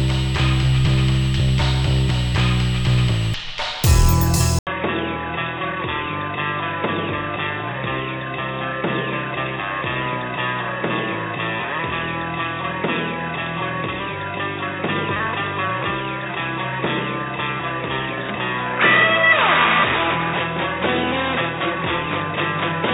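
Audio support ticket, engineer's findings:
Dull, boxy sound from 4.59 s to end, after an 80 ms dropout. Nothing above 3.8 kHz, level down about 5 dB, new noise floor roughly 40 dB under signal. Input likely switched to a poorer device, narrower-band capture path.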